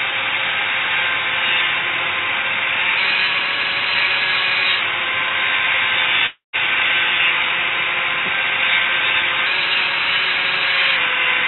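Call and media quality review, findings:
Long network dropout, 6.26–6.56 s. Audio cuts out. Last sound stretched into a fading buzz, then about 150 ms of near silence. Resumes with roughly 270 ms lost. Likely cause: transport packet loss, concealed at the receiver. Narrowband G.711 path, nothing above 4 kHz.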